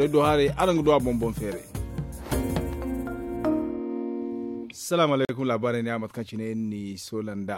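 At 5.25 s the audio cuts to dead silence for 42 ms, resuming at 5.29 s: a Bluetooth stall, likely caused by interference delaying packets until the headphones' buffer ran dry. The waveform shows a flat gap, and the spectrogram a blank vertical stripe.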